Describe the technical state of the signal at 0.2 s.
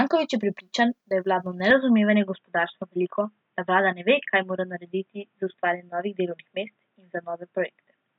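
At 0.2 s the signal is intact, with no dropout, distortion or other fault to be heard at that point.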